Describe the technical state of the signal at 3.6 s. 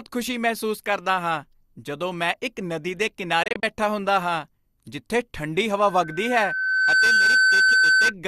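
The sound breaks into several brief holes, each fading out within about 3 ms, the longest about 24 ms, between "ਮੈਂ ਇੱਕ ਨਦੀ ਦੇ" and "ਬੈਠਾ ਹੁੰਦਾ ਹਾਂ ਜਿੱਥੇ" (3.43 to 3.63 s). This is a digital broadcast dropout: the receiver muted on corrupted frames, losing about 96 ms, consistent with roughly four lost frames.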